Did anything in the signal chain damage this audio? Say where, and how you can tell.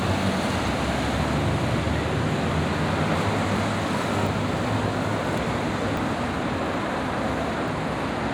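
Yes, it sounds like a capture problem at the driver or buffer stage. There are eight points where the sound jumps forward with no gap, at 0.68, 1.79, 3.16, 4.27, 5.38, 5.97, 6.66 and 7.68 s. Each skip drops somewhere between a tenth and a third of a second. That pattern likely means a dropped buffer (overrun): the app didn't collect its samples in time, the hardware wrote over them, and the surviving ends got butted together.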